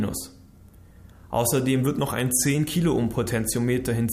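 From 1.86 to 2.55 s the audio slows about 5.5% and sags nearly a semitone flat, then snaps back, likely a drift correction step in clock-matching software.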